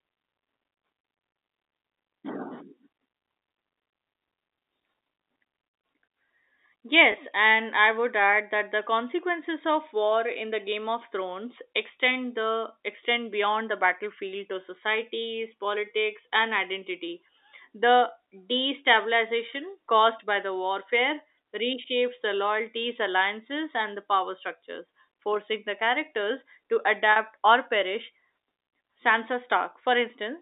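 Packet loss with pitch repetition hits this telephone-band speech at 7.12–7.14 s, just before "and I would add", and at 27.12–27.16 s, between "forcing the characters to" and "or perish". The receiver repeats the last pitch period across gaps of 20 ms and 40 ms, consistent with one and two lost 20 ms packets, giving a brief held buzz.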